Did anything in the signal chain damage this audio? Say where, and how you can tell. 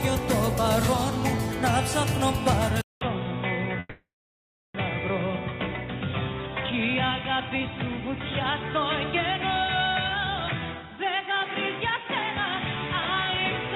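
Yes. At 2.81 s the capture stage most likely switched its input to a poorer device, such as another microphone or a headset's call profile. A silence of about 200 ms marks the switch, and from then to the end the sound is boxy and narrow, with nothing above 3.8 kHz. The level drops by about 5 dB, and a new background noise sits roughly 55 dB below the signal. The lower-grade device and path cause this sudden change in tone.

From 3.79 to 4.77 s the network and receive buffer likely stalled, which is a call audio freeze. With no packets arriving, the jitter buffer ran dry. The receiver held the last sound as a fading buzz and then left about 700 ms of silence, filling roughly 950 ms in total. When delivery resumed, playback continued from where it had stopped, so nothing was lost. The stall inserted a gap, and everything after it now plays about 950 ms later than it should.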